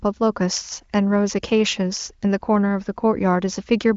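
No technical faults are audible.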